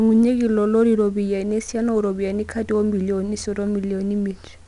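From start to finish the speech carries 4-bit ADPCM compression. Each sample is coded as a coarse step from a prediction, so a gritty hiss rides along with the louder syllables and sharp onsets crunch. Nothing survives above 10.6 kHz, which fits a sample rate near 22 kHz.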